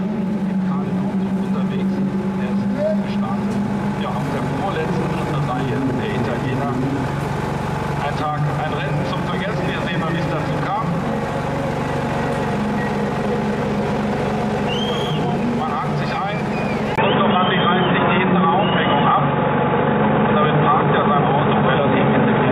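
Input switched to a poorer device at 16.96 s, through to the end at 22.52 s: after a 20 ms gap the audio turns dull, with nothing above 3.8 kHz, a level shift of around 5 dB and a faint new noise floor, likely from recording moving to a narrower-band microphone or headset.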